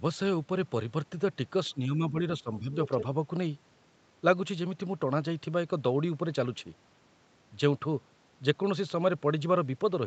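Between 1.73 and 2.19 s, and again from 2.41 to 2.72 s, the talker's speech dips by around 10 dB in short patches. This is speech suppressed in double talk, likely an echo canceller turning the microphone down while the far side spoke. From 2.86 to 3.04 s a second, fainter voice, about 10 dB below the talker, slips through. This is the other side's voice leaking through, likely as residual loudspeaker echo.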